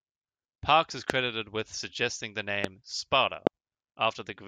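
Loud pops hit at 1.10–1.12 s before "with suggesting the", 2.64–2.67 s after "with suggesting the", and 3.47–3.49 s, each a single thump roughly 20–25 dB above the speech. Each is likely a voltage spike. Unlike a dropout, the speech continues underneath.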